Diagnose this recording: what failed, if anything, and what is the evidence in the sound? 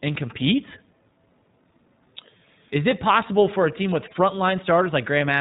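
iLBC codec, throughout the speech: the failure sits at the codec stage. Nothing above 4 kHz survives, so the speech sounds band-limited and telephone-like, with a plainly audible rough, slightly synthetic texture. iLBC codes the excitation of each 20 ms frame independently of the one before. That keeps it robust to loss but coarsens the waveform detail. The roughness fits the 15.2 kbps mode.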